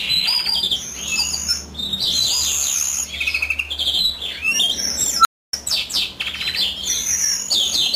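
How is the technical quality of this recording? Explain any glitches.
One glitch stands out: an unstable filter between 5.19 and 5.53 s. A recursive filter in the chain was running with bad coefficients, so each pass fed back more energy than it lost and the output grew without bound. You hear a tone of around 1.5 kHz swell up over about 61 ms into a loud, clipped squeal. The internal values then overflow, and the sound drops out for about 0.28 s until the filter resets.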